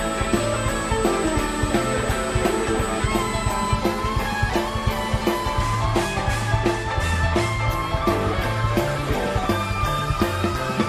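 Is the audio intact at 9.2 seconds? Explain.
Yes, the audio is intact at 9.2 seconds, with no fault to be heard at that moment.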